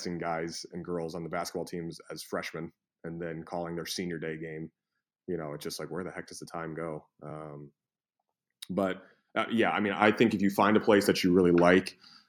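Speech clip with the microphone volume stepped up twice, at 10.02 s by about 6 dB, then at 11.04 s by about 3 dB. Each time the capture software judged the input too quiet and raised the device gain in one jump, so voice and background get louder together.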